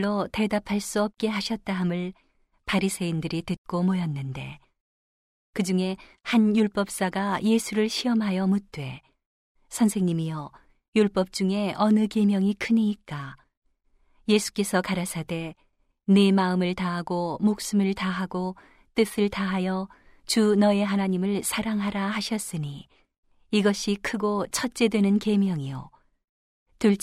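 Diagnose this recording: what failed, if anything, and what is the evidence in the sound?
Nothing failed: the recording shows no fault, so there is no evidence of any failure in the sound.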